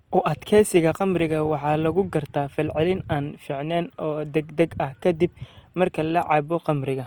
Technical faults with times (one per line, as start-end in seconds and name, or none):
0.00-7.07 Opus compression